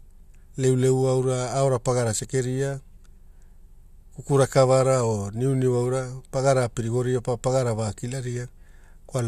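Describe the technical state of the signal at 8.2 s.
At 8.2 s the speech signal is intact, with no dropout, clipping, glitch or other technical fault.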